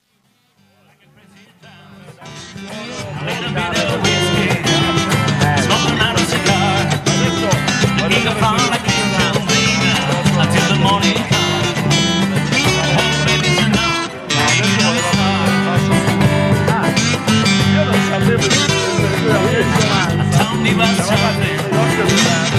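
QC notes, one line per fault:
0.0–3.93 s, truncation distortion on a fade: the fade-in rises from near silence at the start and keeps too few bits, consistent with a 10-bit stage without dither. It is worst from 0.0 to 2.31 s, where the waveform shows square stair-steps and the spectrogram shows broadband grit instead of clean low-level detail.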